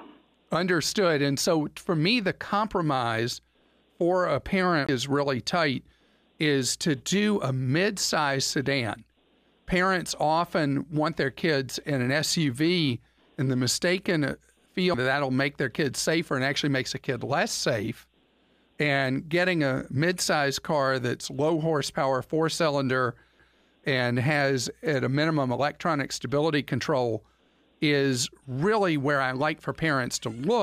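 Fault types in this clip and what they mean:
CD skip: the laser jumped to another turn of the disc's spiral, so playback muted and resumed from a different point. The speech ticks and lurches at 4.87 s after a roughly 20 ms gap, and at 14.94 and 23.39 s with near-instant mutes.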